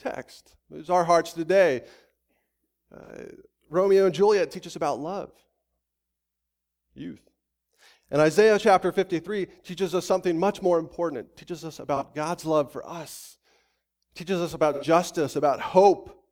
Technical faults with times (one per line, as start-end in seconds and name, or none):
3.04-3.10 AAC frame loss with concealment
11.96-12.03 AAC frame loss with concealment
14.73-14.84 AAC frame loss with concealment